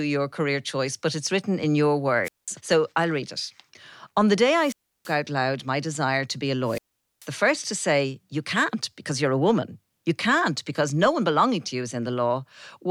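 Wireless microphone squelch dropouts hit at 2.24, 4.57 and 6.64 s. Hiss rises as the radio signal fades. The receiver then mutes for 0.2, 0.33 and 0.44 s.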